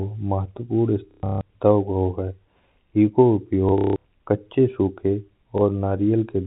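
Packet loss with last packet repeated hits at 1.11–1.41 s, 3.69–4.05 s just before "कच्चे सूखे", and briefly at 5.58 s after "कच्चे सूखे". Repeated blocks, which fit 30 ms packets, stutter robotically. A spectrogram shows vertical seams and frozen, identical slices, and the waveform shows copied segments.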